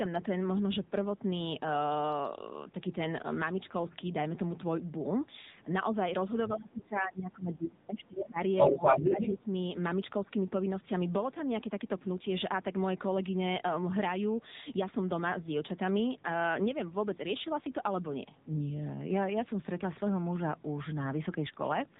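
The whole clip passes through the AMR narrowband mobile codec. Sampling at 8 kHz removes everything above 4 kHz, and the low bitrate, which fits AMR-NB at around 8 kbps, leaves too few pulses to excite the vocal-tract model. The speech sounds muffled, buzzy and plainly synthetic throughout.

From 6.48 to 8.41 s the speech is suppressed in double talk. The likely cause is both sides talking at once, so the echo canceller could not tell the near talker from loudspeaker echo and turned everything down. The voice sinks by as much as about 20 dB over roughly two seconds, thinning and fading in pieces.

Near the end of that dip, from 8.17 to 8.26 s, the other side's voice leaks through. The canceller likely left a residue of the loudspeaker signal in the microphone, heard as a brief scrap about 5 dB below the talker.

From 8.58 to 9.35 s the other side's voice leaks through again, for longer. 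This time the likely uncancelled echo sits about 10 dB above the talker, so the foreign voice dominates.

Overlapping that, from 8.69 to 9.46 s, speech is again suppressed in double talk. The likely cause is the canceller clamping down while both voices are present. The talker drops by about 10 dB for under a second, sounding pushed back and partly cut out.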